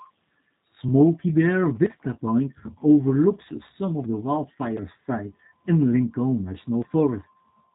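Throughout the clip, the speech carries plainly audible G.729 codec damage: rough and slightly synthetic, consistent with the 8 kbit/s G.729A variant. Each 10 ms frame is resynthesised from a vocal-tract filter and sparse pulses, so a spectrogram shows nothing above 4 kHz.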